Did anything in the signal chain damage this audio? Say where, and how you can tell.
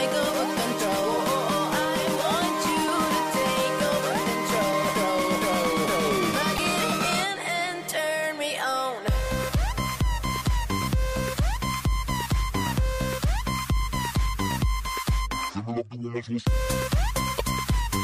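Yes. Damaged data in a compressed stream, codec stage, at 6.55 to 6.59 s and 17.36 to 17.41 s: brief blips where the decoder misreads corrupt frames, loses sync and relocks.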